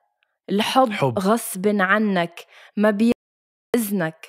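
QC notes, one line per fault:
3.12–3.74 s, audio dropout to silence: the speech cuts off abruptly and resumes after about 0.62 s of silence with no room tone underneath, likely because the input signal was lost while the recorder kept writing silence, so that stretch of speech is missing.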